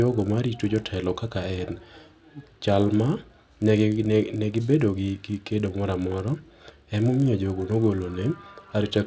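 Throughout the speech, a resampler restarted on every block causes a steady 50 Hz buzz under the signal. It fits a 48 kHz to 16 kHz conversion run on 20 ms blocks, each converted in isolation. Each block edge gets a small error, and these repeat as the buzz.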